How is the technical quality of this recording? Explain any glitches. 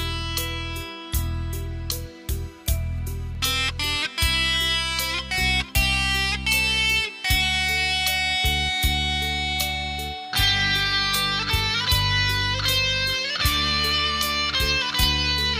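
The recording has one recurring glitch: clock drift buffer slips. From 3.35 s to 15.03 s, about four short clicks or pops land every 3.9 s. The likely cause is two clocks drifting apart by roughly 300 ppm, forcing around fifty samples to be dropped or repeated each time. The strict, even spacing sets this apart from random dropouts or packet loss.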